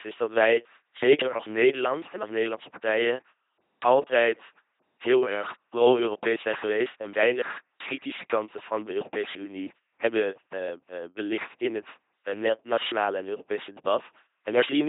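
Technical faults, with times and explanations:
throughout LPC-10 vocoder: heavily damaged speech, rebuilt by a simple filter driven by buzz or hiss, sounds robotic, nothing above 3.8 kHz, fitting 2.4 kbit/s.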